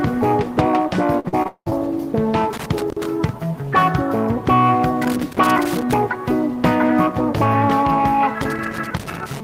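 Repeated packet loss (robotic sound) runs from 1.19 to 1.73 s: several dropouts, longest about 190 ms, are patched by extending prior sound, leaving choppy audio with pieces missing.

Loose connector crackle at 2.53–3.06 s, 5.02–5.93 s and 8.42 s to the end: an intermittent contact chops the signal, producing irregular bursts of scratchy crackle.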